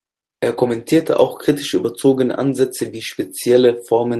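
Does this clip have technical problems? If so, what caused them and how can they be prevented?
No, no technical problems.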